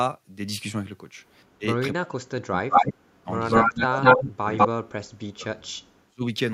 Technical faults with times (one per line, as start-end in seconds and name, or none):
1.58-6.24 speech suppressed in double talk
2.70-2.94 echo leak
3.49-4.68 echo leak